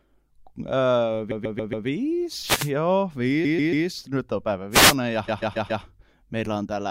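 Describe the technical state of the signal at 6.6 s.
At 6.6 s the audio is intact, with no audible fault in the signal at that moment.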